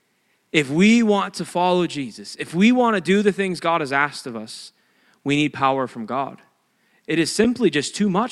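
At 5.60 s, just after "of us we need", and again at 7.44 s, an underrun with held sample briefly flattens the waveform for 1.45 ms and 5.1 ms. The first pause lasts 64 samples. Unlike a dropout to silence, the output freezes at its last level rather than zero, so the sound stalls almost click-free. It resumes softly because playback continues where it stopped.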